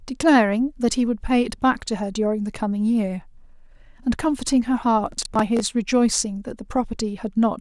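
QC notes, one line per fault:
5.12–5.6 s, processor overload crackle: the processor missed a string of buffer deadlines, about ten of them, replaying stale audio in hard-edged chunks of roughly 10 ms, heard as gritty crackle over the speech.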